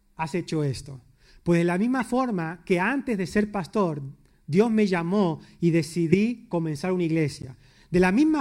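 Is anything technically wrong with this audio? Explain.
Yes. This speech has a corrupt frame decoded three times: 2.00–2.02 s, 6.12–6.15 s (the loudest, near -10 dBFS), and 7.39–7.45 s. Damaged bits were decoded as-is, placing energy at wrong frequencies for a few frames, heard as chirpy blips. Unlike frame concealment, nothing repeats.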